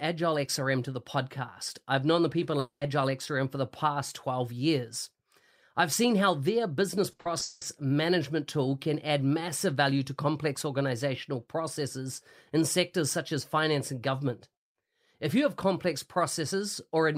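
Right after "I've known the people", at about 2.59 s, the sound breaks off for roughly a quarter of a second, up to 2.83 s. What you hear is the last bit of sound smeared on as a fading buzz, then about 120 ms of near silence before things pick up again. Around 220 ms of the speech simply never shows up. That's most likely a long network dropout, with the receiver papering over the hole until audio arrived again.

The second problem sits between "seen how their business" and "management tool can add", from 7.11 to 7.63 s. This is repeated packet loss, giving that robotic sound: five separate holes land within about half a second, the longest about 180 ms. Each one gets filled by stretching the previous sound, so roughly 58 percent of that stretch is patched rather than real. The result is choppy, with about 300 ms of the speech missing.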